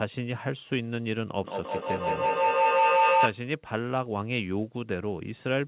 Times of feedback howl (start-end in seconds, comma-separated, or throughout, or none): 1.44-3.44